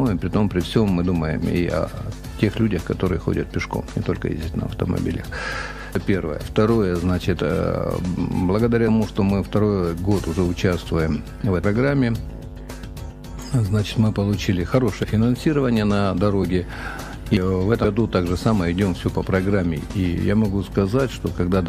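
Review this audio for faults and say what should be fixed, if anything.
Skips occur at 5.95, 11.64 and 17.37 s. Each drops roughly a fifth of a second. They repeat about every 6 s, and the two sides join with no gap. This is likely audio missing between chunks. Overlapping or double-buffered chunk handoffs would prevent it.

A brief glitch occurs from 15.03 to 15.05 s. This is damaged data in a compressed stream. The decoder misreads the corrupted frames, loses sync, then resumes at the next frame header. Error-checked transfer and re-encoding from the source would prevent it.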